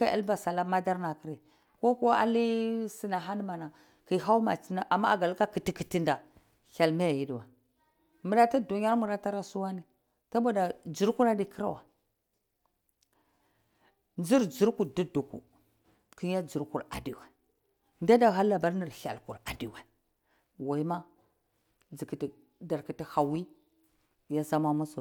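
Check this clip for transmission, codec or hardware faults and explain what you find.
Nothing in the speech signal points to a transmission, codec or hardware problem; it stays continuous and consistent throughout.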